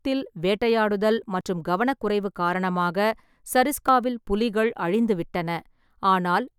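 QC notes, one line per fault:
1.41 s and 3.88 s, audio missing between chunks: the recording path likely works in blocks of about 2.5 s and drops a sliver of signal each time it closes one block and opens the next, which fits the 2.5 s spacing of the two skips. Around 20 ms vanishes at each seam, and the two sides are butted together with no silence, so the speech jumps forward abruptly, the second time just before "புலிகள் அழிந்துவிட்டன".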